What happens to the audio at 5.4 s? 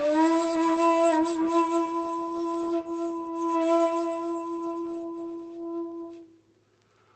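Nothing goes wrong at 5.4 s: the audio carries on intact through that moment, with only the ordinary band-limiting and coding character of the Opus call path it travelled through.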